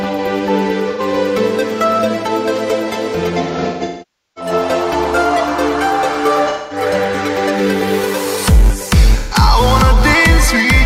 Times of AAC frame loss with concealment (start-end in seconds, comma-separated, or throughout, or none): 0.90-1.01, 3.42-4.51, 6.49-6.82, 9.18-9.35